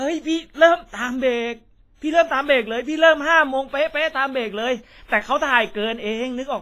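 WMA compression damage runs through the whole recording. The speech sounds ringing and washy, with a hiss that swells and fades along with it, and nothing is left above 15.5 kHz. This heavy smearing is likely a transform codec at a low bitrate, around 24 kbps, zeroing weak spectral lines.

Pre-echo appears from 3.68 to 3.73 s. A sharp attack fell late in a long transform block, so quantisation noise sized for the loud onset spread back over the quiet moment before it. A short hiss of about 43 ms leads in, and the attack itself sounds softened.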